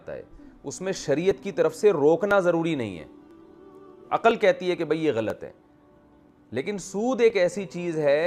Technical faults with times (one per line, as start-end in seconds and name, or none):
0.31-7.30 periodic USB or driver dropouts